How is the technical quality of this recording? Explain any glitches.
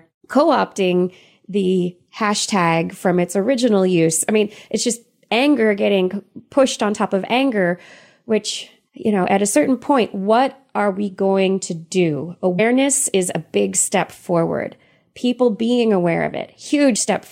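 Two dropouts from compressed frames skipped mar the recording. At 12.58 s, between "we going to do" and "is a big step", roughly a tenth of a second of audio vanishes, and at 16.96 s around 50 ms goes. In each case a few whole frames were missing or rejected by the decoder, so playback jumps forward.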